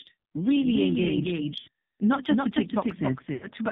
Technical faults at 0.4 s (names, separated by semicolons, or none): doubled audio track; AMR narrowband mobile codec